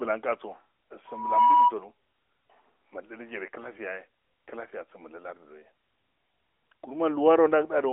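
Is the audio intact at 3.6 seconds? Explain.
No. A lost AMR speech frame at 3.62–3.69 s: the decoder reuses the last good pitch and vocal-tract settings at reduced gain. The result is a brief dip or warble, consistent with one 20 ms frame, rather than the hard silence or click of a plain dropout.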